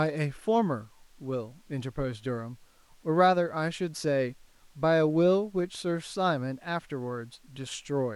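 Nothing stood out on listening to this speech recording.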